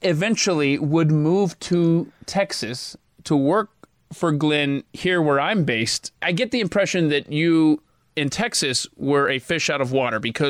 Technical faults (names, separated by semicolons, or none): none